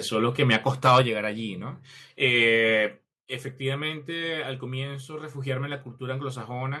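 At 0.53 to 0.56 s and 0.86 to 1.0 s, loud syllables crackle harshly, likely microphone overload, with peaks about 3 to 4 dB past the converter limit, tops cut flat. At 1.02 s, voice and background drop together by about 4 dB in one clean step, likely microphone volume stepped down after those peaks, with no crackle.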